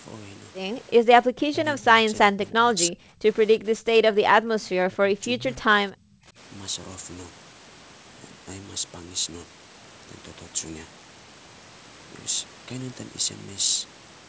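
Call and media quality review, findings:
Speech suppressed in double talk: speech dips by up to about 30 dB at 0.97–1.08, 1.27–2.08, 2.28–3.23, 3.59–3.88, 4.04–5.46 and 5.62–6.38 s. Likely the echo canceller mistaking near-end speech for echo.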